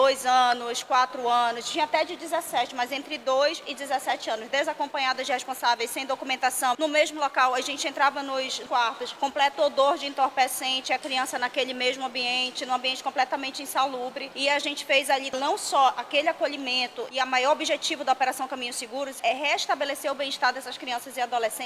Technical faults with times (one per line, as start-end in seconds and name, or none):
none